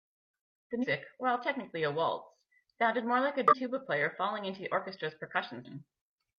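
At 0.79, 3.48 and 5.61 s the speech breaks into brief glitches of about 50 to 60 ms each, the sound of damaged data in a compressed stream. Corrupted bytes make the decoder misread those frames and lose sync until it finds the next valid frame header.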